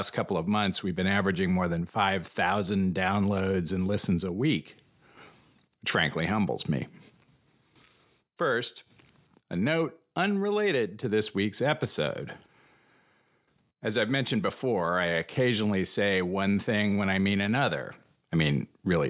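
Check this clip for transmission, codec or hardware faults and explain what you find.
Nothing in the speech points to a transmission, codec or hardware problem; the signal is steady and continuous, with no technical fault to report.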